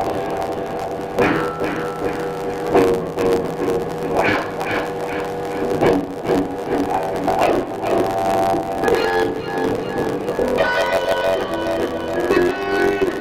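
All through, a block size mismatch (truncated) chops each block's tail: a 92 Hz buzz, audio 1.07 times fast, timbre unchanged, fitting 512-sample writes.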